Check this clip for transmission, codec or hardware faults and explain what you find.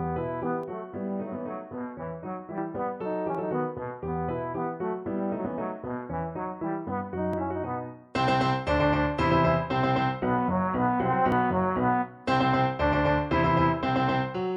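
There are two problems here: a stretch of comb filtering near the start, and three tiny skips spaced evenly through the clip.

From 0.63 to 2.58 s there's channel delay (comb filtering). One channel is running roughly 20 ms behind the other, and when they're folded to mono the shared content cancels at evenly spaced frequencies, starting down around 30 Hz and repeating up the spectrum. The result is a rough, slightly doubled colouring over that stretch.

Then there are short dropouts at 3.35, 7.33 and 11.32 s, about 4 s apart. Each loses something like 15 ms, and the audio on either side is butted together with no gap, so you hear a small skip or hiccup. That regular spacing points to audio missing between chunks, likely from a recorder or processor working in 4-second blocks and losing a sliver at each handover.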